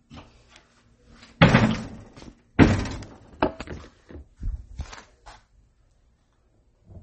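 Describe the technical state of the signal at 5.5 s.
At 5.5 s, as throughout the clip, plainly audible damage likely comes from MP3 compression at a very low bitrate, around 32 kbps. Starved of bits, the encoder zeroes weak lines, leaving a watery swirl, and cuts the treble. A spectrogram shows a hard ceiling near 8.3 kHz.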